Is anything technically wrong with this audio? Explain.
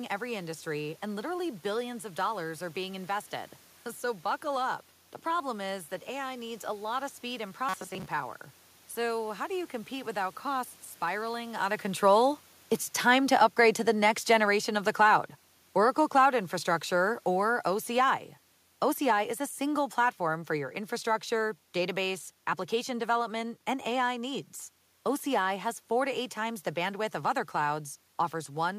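Yes, there are two faults.

From 7.69 to 8.06 s, just after "lot of speed and", the speech turns into a rigid, metallic buzz that only loosely tracks the words. This is robotic sound from repeated short buffers. Audio was likely arriving too seldom, so a short chunk of about 5 ms was replayed over and over while most of the real audio in that stretch was skipped. The repetition imposes a fixed 188 Hz pitch. On a spectrogram this shows as flat, evenly spaced harmonics at multiples of 188 Hz, and the waveform shows identical cycles repeating.

From 12.91 to 20.14 s the level sinks steadily by about 7 dB, ending just before "for your infrastructure database". This is the automatic gain falling: the gain control judged the input too loud, or its background noise too strong, and gradually lowered its gain. The room noise drops along with the speech, which separates this from the talker's movement around 11.5 s. 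A waveform view shows the envelope tapering smoothly, and a spectrogram shows the noise floor darkening along with the speech.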